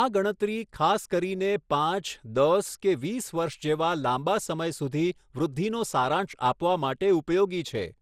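Speech runs through the whole clip with a swirly, smeared, hollow quality. Consonant attacks blur. Nothing is present above 15.9 kHz. The texture is worse than one pass at the rate it suggests, around 96 kbit/s MP2, would give. This is generation loss, likely from decoding and re-encoding about seven times. Each pass quantised on a new frame grid, so the damage compounded.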